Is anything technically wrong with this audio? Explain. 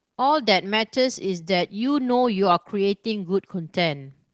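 Yes, there's Opus voice compression damage running through the whole speech clip, and it's plainly audible. Everything above about 8 kHz is gone, so the speech sounds muffled. The SILK coder models speech as a linear-prediction filter driven by a coarsely coded excitation, which gives the voice a hoarse, slightly robotic edge. That level of degradation fits a low bitrate of around 12 kbps in 20 ms frames.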